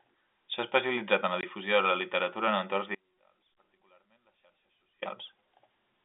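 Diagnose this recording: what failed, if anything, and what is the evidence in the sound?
A hard-edged silent hole sits at 1.41 to 1.43 s. It is network packet loss filled with silence, consistent with two 10 ms packets.

From 2.95 to 5.02 s the sound cuts abruptly to about 35 dB down. This audio dropout to a faint residue likely comes from an upstream break while the downstream path stayed live.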